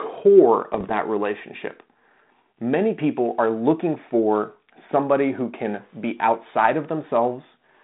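From 0.74 to 0.91 s there's a burst of bit errors on an ADPCM link: pops and rough, gritty bits with quick jumps in level. A fraction of a percent of bits got flipped, and because the decoder adapts its step size and prediction from the bits it receives, each bad bit knocks it off track for a few milliseconds. That's why it rings on rather than clicking once. Around it you can hear the 32 kbit/s G.726 telephone band, roughly 150 Hz to 3.7 kHz.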